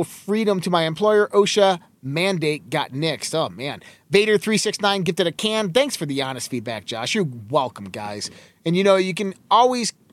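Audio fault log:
No fault was heard in this speech clip.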